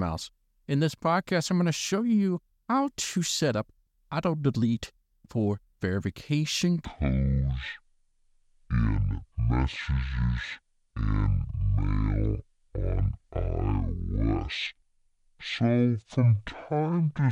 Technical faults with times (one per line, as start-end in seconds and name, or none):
6.85-17.31 section at the wrong speed